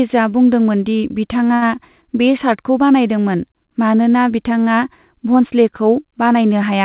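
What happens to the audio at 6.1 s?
Nothing goes wrong at 6.1 s: the speech carries on intact through that moment, heard through the narrowband call path that leaves nothing above about 4 kHz.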